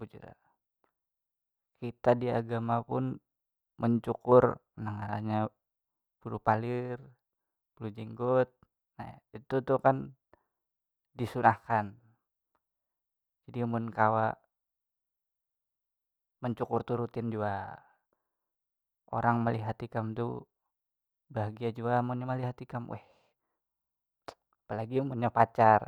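No technical faults can be heard anywhere in the speech recording. There is nothing in it that calls for a time mark or a correction.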